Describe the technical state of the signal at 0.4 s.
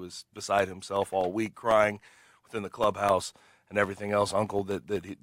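Periodic USB or driver dropouts are running at 0.4 s, part of a train spanning 0.09 to 5.09 s. Something is interrupting the USB bus or audio driver every 0.125 s, and each interruption replaces roughly a millisecond of the speech with silence. Eight times a second, that produces an evenly spaced tick or small pop. It is heard only where the speech carries signal and vanishes in the quiet gaps between phrases.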